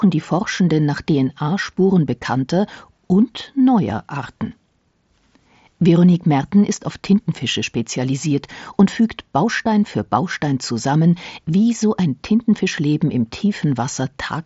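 Nothing stood out on listening to this speech, which comes through the wideband Bluetooth headset codec with its band stopping near 7.7 kHz.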